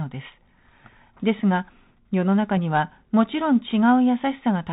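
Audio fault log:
throughout, Bluetooth CVSD headset codec: the speech is confined below 4 kHz and carries a grainy hiss, with s sounds turning scratchy and harsh. The encoder sends a single up-or-down bit per sample and adapts its step size, so fast, loud high-frequency detail outruns the steps and smears into distortion, which fits a 64 kbps CVSD link. A clean telephone band-limit would sound muffled but smooth; here the slope-overload grit and the granular noise floor give CVSD away.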